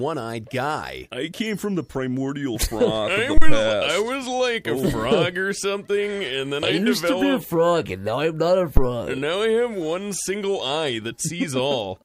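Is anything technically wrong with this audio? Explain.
Yes. There are two phantom power thumps, at 3.37 to 3.58 s and at 8.77 to 8.90 s. A supply switched on a live input sends a voltage step through the coupling capacitors. Each thump peaks near full scale, about -1 dBFS, and dies away within 48 ms and 29 ms.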